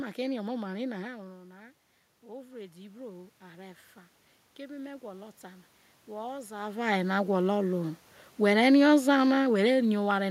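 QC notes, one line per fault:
2.21–3.86 s and 4.56–7.68 s, automatic gain rising: the input level dropped by about 14 dB, and the gain control responded by slowly turning itself up. The first ramp adds about 4 dB over 1.65 s. The second adds about 7 dB over roughly 3 s. Voice and room noise swell together, which separates this from a talker moving closer. Around 6.5 s the talker does shift position, but that changes only the voice level, not the background.
8.43–10.26 s, automatic gain falling: the gain control judged the input too loud, or its background noise too strong, and pulled its gain down by about 3 dB over nearly 2 s. The voice and the room noise sink together at the same gradual rate. That shared, smooth decline marks a gain adjustment rather than a talker leaning back from the microphone, which would leave the background level unchanged.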